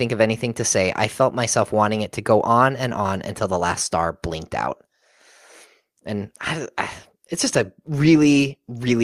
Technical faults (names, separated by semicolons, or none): none